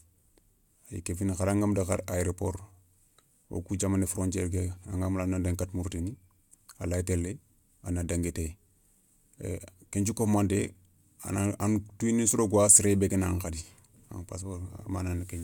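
Listening to the speech in this clip, nothing technical stood out.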